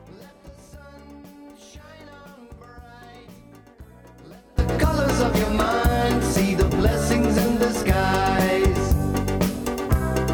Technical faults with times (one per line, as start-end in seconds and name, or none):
0.00-4.59 one channel inverted